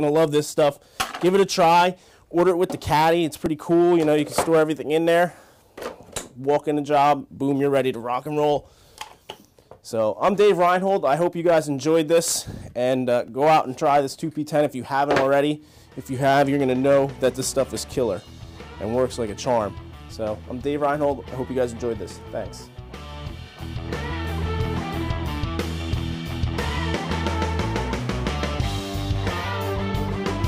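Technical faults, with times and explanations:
3.46 s and 13.28 s, repeated buffer: at each moment fresh audio failed to reach the output in time, so the device replayed its last block, a piece only 1.45 ms long, which fits a 64-sample buffer. It plays two extra times at 3.46 s and three at 13.28 s, with essentially nothing lost. Such tiny repeats give a click or brief buzz rather than a stutter. A waveform shows identical short cycles with hard joins; a spectrogram shows a thin vertical broadband line.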